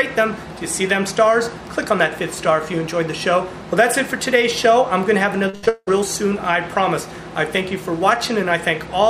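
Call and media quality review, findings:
Repeated packet loss (robotic sound), 5.49–5.89 s: choppy stretch, about 80% concealed. Jitter buffer/PLC repeating last audio across four gaps, longest 179 ms.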